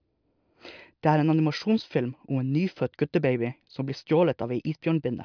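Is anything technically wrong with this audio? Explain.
No, nothing technically wrong turns up anywhere in this speech recording.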